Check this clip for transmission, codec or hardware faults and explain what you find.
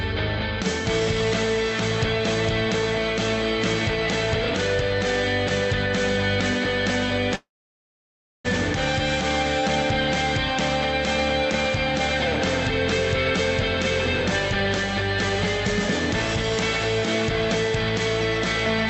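One transmission fault stands out: a long network dropout from 7.35 to 8.48 s. Playback stops receiving audio, and the receiver extends the last sound as a fading buzz before settling into about a second of silence. When sound resumes, roughly 0.6 s of material is simply gone. The likely cause is a stall in packet delivery, with the jitter buffer shifting its delay by around half a second to recover. All of this passes through an Opus call path whose band limit sits near 8 kHz.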